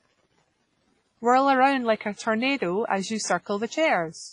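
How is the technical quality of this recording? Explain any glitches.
The quality is held back by heavy codec damage across the whole clip, which sounds like likely WMA compression. The speech rings and washes, with hiss breathing along, and nothing above 10.5 kHz, which fits roughly 24 kbps.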